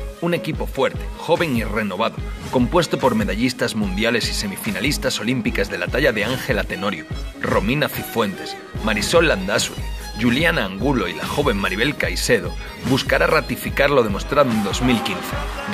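No technical faults are audible.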